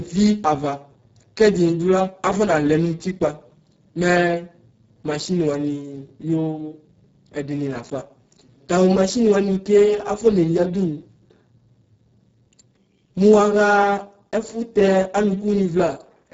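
Speech runs through a Speex codec for the whole clip. At the heavy damage heard here, which fits roughly 5.8 kbps, it sounds hoarse, noisy and close to robotic. Above 4 kHz there is only a noise-like fill, and nothing above 7.7 kHz. That shaped hiss over a buzzy core sets it apart from plain bandwidth limiting.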